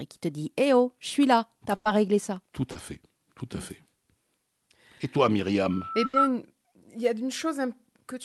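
Speech carried over a call codec and jitter buffer, with its top end limited to about 12 kHz, has two bursts of packet loss, at 1.75–1.87 s and 6.05–6.15 s. Consecutive packets were lost or arrived too late to play, so the receiver stretched the last sound for 100 ms and then 80 ms, fading it into a held buzz or hiss. The speech then jumps ahead with that stretch missing. A short concealed packet loss at 2.71–2.77 s left a 40 ms hole that the decoder patched by extrapolating the preceding sound, heard as a brief smear or wobble before the real signal blends back in.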